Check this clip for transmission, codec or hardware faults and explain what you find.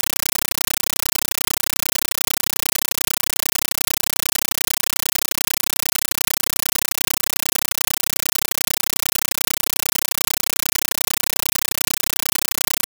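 Loud, chattering static replaces the speech throughout, pulsing 31.25 times a second in 9.33 ms bursts. This is a compressed stream played as audio. An AC-3 bitstream, which fits 448 kbps, was passed on as ordinary samples without decoding, so each frame becomes noise, then silent padding.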